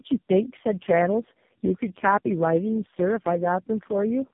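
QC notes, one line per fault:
Throughout: tandem speech coding. The speech passed through three low-rate speech coders in a row, with 64 kbit/s mu-law links between them, so each border meant a full decode and re-encode. Every coder modelled the previous one's errors as if they were speech, and the damage compounded into rough, muffled, warbling speech with nothing above 3.6 kHz. Unlike a single low-bitrate codec, the roughness is layered and heavier than any one stage would give.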